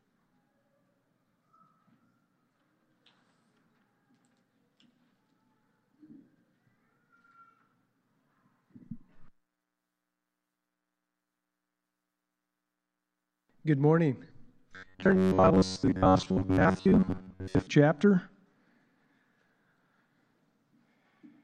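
From 14.76 s to 17.68 s the sound becomes a rigid, metallic buzz fixed at 93.8 Hz: robotic sound from repeated short buffers. Gaps were likely filled by looping a chunk of about 10.7 ms, so roughly 70% of that stretch is repeated material.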